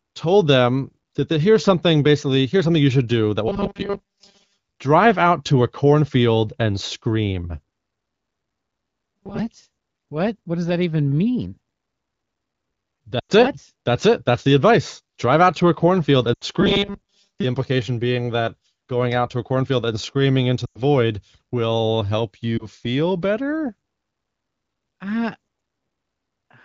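Speech heard over an AMR wideband (HD Voice) link at about 15.85 kbit/s shows two distinct faults. From 3.48 to 4.58 s, right after "you should do that", and again from 16.61 to 17.44 s, the voice becomes a rigid metallic drone: robotic sound from repeated short buffers. A fixed buzz at 200 Hz, which fits one 5 ms stretch being looped, overrides the natural pitch while most of the real audio is skipped, likely because packets are arriving too slowly for playback. Lost AMR speech frames sound different. They are short smears that fade rather than a steady pitched buzz. They occur at 13.19 to 13.32 s (100 ms), 16.33 to 16.44 s (80 ms) and 20.66 to 20.79 s (100 ms), just after "cornfield and screaming into", plus a single 20 ms frame at 22.57 s between "will help" and "feel better". In each, the decoder stretches the last good sound at falling level, so the voice sags briefly and returns weak.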